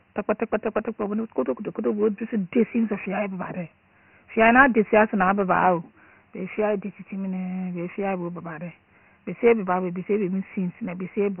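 Dialogic VOX ADPCM runs through the whole clip, from start to finish. Each sample is stored as a coarse 4-bit code for its difference from a predicted value rather than recording it outright, and at this level the prediction keeps lagging, so a gritty, granular hiss clings to the speech and roughens every syllable. Nothing reaches above 3 kHz, leaving the sound muffled and telephone-thin, which points to a 6,000-sample-per-second rate near 24 kbps.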